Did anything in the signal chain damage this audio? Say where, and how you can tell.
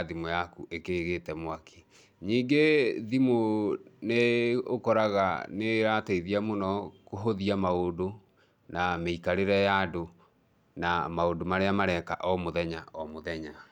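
No, nothing in the signal chain stood out on listening to this speech recording.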